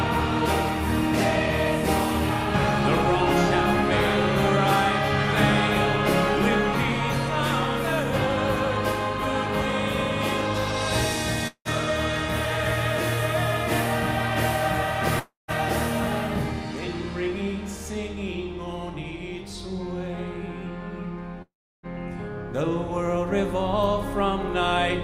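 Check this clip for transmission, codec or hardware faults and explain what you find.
Three gaps turn up, at 11.47 to 11.68 s, 15.19 to 15.51 s and 21.42 to 21.86 s. Each time the last bit of sound gets smeared into a fading buzz, then goes quiet (about 70, 160 and 340 ms of near-silence), and the audio picks up again with roughly 180, 300 and 420 ms simply gone. That's likely a long network dropout: packets stopped arriving, the receiver stretched what it had, then gave up until the stream returned.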